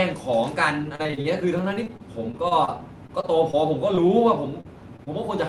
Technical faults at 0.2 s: none

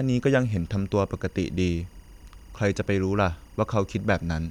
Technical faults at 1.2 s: timecode bleed

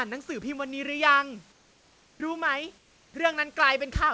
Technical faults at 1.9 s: comfort noise in place of the background

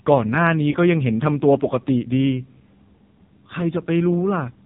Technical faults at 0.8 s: AMR narrowband mobile codec; lost AMR speech frames

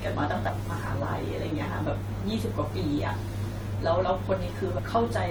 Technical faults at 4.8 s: damaged data in a compressed stream

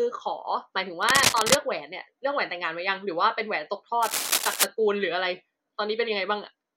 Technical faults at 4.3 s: cable scratch noise

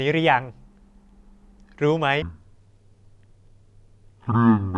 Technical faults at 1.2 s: none

